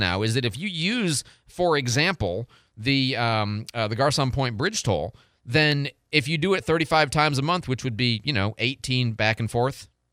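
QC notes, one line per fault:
5.72 s, dropped samples: a single sharp click in the speech, likely a tiny fraction of a millisecond gone missing, so the waveform suddenly jumps ahead.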